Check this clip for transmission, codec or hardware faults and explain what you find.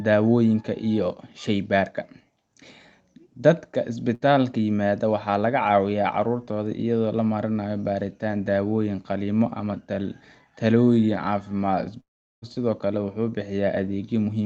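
Two transmission faults stand out.

From 4.15 to 4.23 s, a burst of packet loss: concealment holds the last sound for about 58 ms, a smeared, fading band on the spectrogram, then skips 60 ms.

From 12.00 to 12.45 s, a long network dropout is the likely cause: a fading buzz or hiss, then a flat, near-empty waveform gap. About 420 ms of audio never returns.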